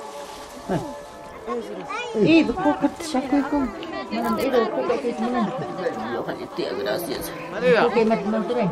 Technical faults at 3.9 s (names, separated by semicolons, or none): none